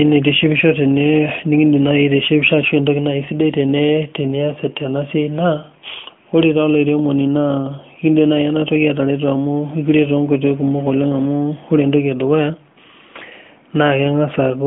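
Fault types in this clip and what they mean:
Nothing here counts as a fault; the speech simply has the narrow, phone-call sound of a mobile line, with nothing reaching above about 3.6 kHz.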